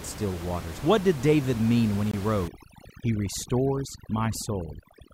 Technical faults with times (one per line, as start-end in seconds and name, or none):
2.11-2.14 gap between stream segments
2.48-5.13 overdone noise removal